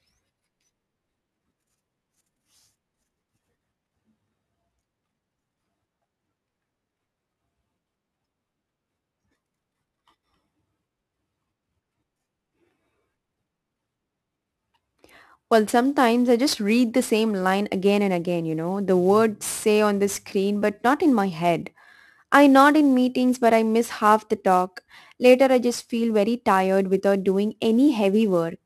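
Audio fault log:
Throughout, sample clock jitter: timing wobble of roughly 10 µs makes samples land early or late, adding a hiss around 25 dB below the speech that roughens loud, bright syllables and vanishes in pauses. On a spectrogram, high-frequency noise tracks speech energy and leaves gaps clean.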